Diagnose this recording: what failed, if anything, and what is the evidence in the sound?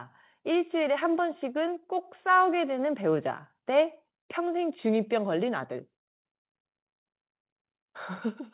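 Call processing stepped the microphone volume up at 1.02 s and 2.04 s, about 3 dB then 4 dB, speech and background jumping together.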